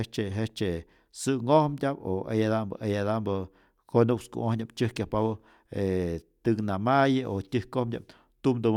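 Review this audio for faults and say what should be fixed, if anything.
No technical faults can be heard in the speech. Nothing here needs fixing or preventing.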